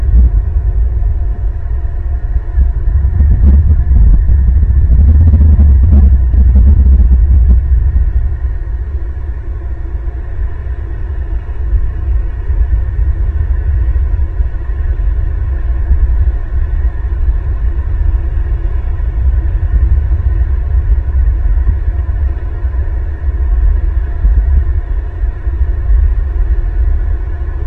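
No technical faults can be heard anywhere in this audio.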